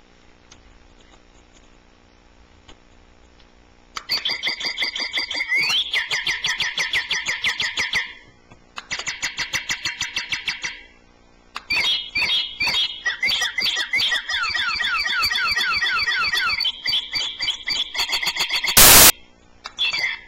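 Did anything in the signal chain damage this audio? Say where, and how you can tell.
Yes. Samples built from the wrong bytes, from 18.77 to 19.1 s, a stretch of about a third of a second, at the sample-format conversion stage. Here the sound is replaced by loud, harsh broadband noise that stops abruptly at both ends. The reader assembled each sample from misaligned or swapped bytes, so the rapidly changing low-order bits landed in the most significant position and became the bulk of every value, burying the real signal under broadband noise.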